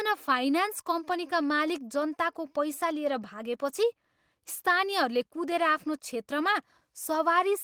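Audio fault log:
No audible faults detected.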